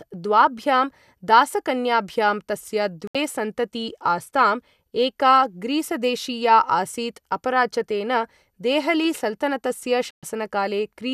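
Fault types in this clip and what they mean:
digital broadcast dropout: the receiver lost good frames and muted the speech, leaving sudden silent holes, about 72 ms after "दासकन्याभ्यां तस्य" and 120 ms after "देहली सलतनतस्य". On a spectrogram these are clean vertical blank bands; the waveform drops abruptly to silence.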